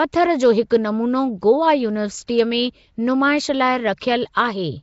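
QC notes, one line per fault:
Throughout, Nellymoser compression, likely: the speech carries a plainly audible rough, hissy halo and a smeared, underwater quality, with nothing above about 7.7 kHz. This points to a Flash-era codec coding short blocks at a fixed low bit depth, filling weak bands with noise, at around 32 kbps.
0.22 to 0.76 s, hard clipping: for roughly half a second the loudest parts are driven about 2 dB past what a stage could pass, so peaks are cut flat. Those flattened tops add high harmonics, heard as crackle on the peaks.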